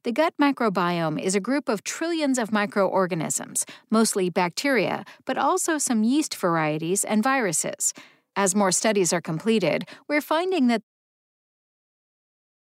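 Nothing in this speech clip points to a technical problem, and the gentle easing-down of the level near the end is just an editor's fade-out doing its job.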